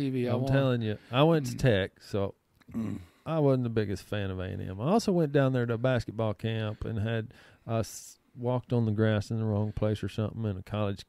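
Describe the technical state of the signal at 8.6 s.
At 8.6 s the signal is intact, with no dropout, distortion, glitch or other fault at that moment.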